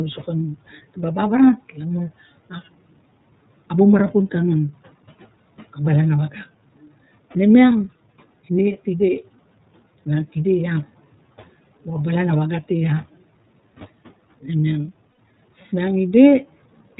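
Speech coded throughout with the iLBC codec, and the damage is plainly audible: the band stops at 4 kHz, giving a narrow, telephone-like sound, and the voice has a slightly rough, synthetic edge. This fits iLBC's 30 ms frame mode at 13.33 kbps, where each frame's excitation is coded independently. Lost iLBC frames appear at 15.12 s, where about 60 ms of sound turns into a held, faintly buzzy vowel as the decoder repeats the last pitch cycle mixed with noise. The speech recovers almost immediately afterwards because each frame decodes without relying on the one before.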